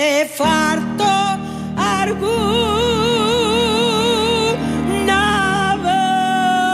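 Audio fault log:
Nothing here needs flagging; there's no fault anywhere in the clip.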